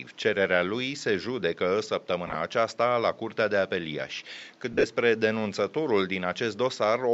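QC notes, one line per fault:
2.27–2.35 s, lost LE Audio frames: between "lui se judecă" and "aceasta la", about 37.5 ms drops out in short runs across 75 ms. The LC3 decoder replays the last spectrum with random signs, so harmonics smear into brief noisy vertical patches on a spectrogram.
4.73–4.84 s, lost LE Audio frames: 75 ms lost across 105 ms, with runs up to about 30 ms. The repeated spectrum with random signs makes spectrogram harmonics blur into noise, above room noise about 33 dB down.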